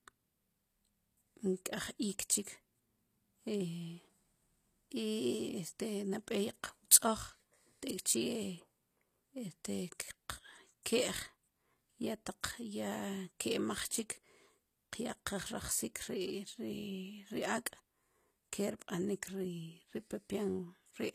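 Throughout the speech the treble sounds synthetic, as with HE-AAC compression, likely at a low rate around 24 kbps. The upper band is rebuilt from copied lower bands, so sibilants turn gritty and lispy, and nothing is present above 14.9 kHz.

At 10.83 to 10.86 s a pre-echo appears: a brief hiss, about 28 ms long, runs ahead of a sharp attack. The block's quantisation noise, sized for the loud onset, spills into the quiet gap before it and softens the attack.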